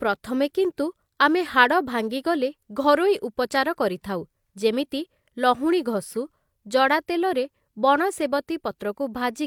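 A speech recording whose signal carries no audible technical fault anywhere in its duration.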